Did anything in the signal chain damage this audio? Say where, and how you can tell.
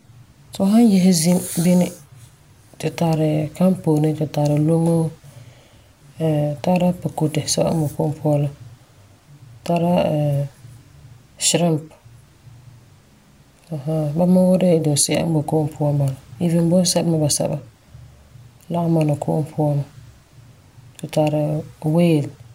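No, nothing in this recording stood out on listening as a sign of damage anywhere along the chain.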